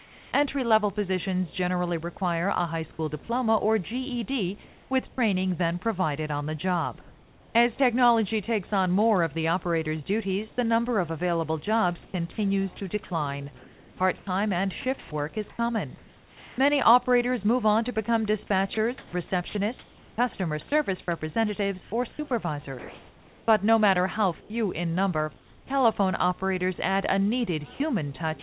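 Throughout, a video or display buzz sits at roughly 25 dB below the signal. A screen or video cable is coupling into the audio, giving a buzz at the 60 Hz field rate with hash riding above it. That hash is what separates it from plain mains hum. Like everything else here, it stops at 4 kHz, the limit of the G.711 call path.

From 0.00 to 0.32 s, and again within 4.64 to 7.55 s (about 0.9 s of it), there is comfort noise in place of the background. The real background, about 26 dB below the loud parts, gives way to a smoother synthetic hiss. In the opening stretch it is about 4 dB quieter. The likely cause is discontinuous transmission: the sender goes quiet during pauses and the receiver fills them with generated noise. Only the background changes, and no sound is lost.

Between 5.09 and 5.18 s the sound is dropped by the voice detector. About 50 ms of real sound vanishes into steady noise before returning, likely because the detector judged a quiet passage to be background. 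Unlike the comfort-noise patches, actual content goes missing here, in a single hole.

From 10.49 to 16.58 s and from 18.74 to 25.70 s the sound is chopped by the voice detector. About 1.56 s and 1.86 s respectively are replaced, spread over two or more holes, likely as the detector switches on and off. That repeated gating, rather than one gap, is what marks these stretches.

At 28.4 s, right at the end, the sound is dropped again. The last 30 ms give way to noise.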